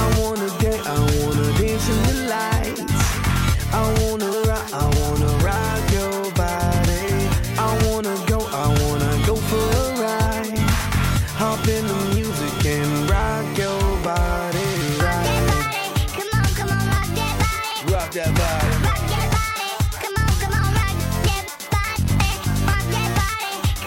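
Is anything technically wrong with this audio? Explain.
No, nothing technically wrong turns up here; it all sounds just as it should.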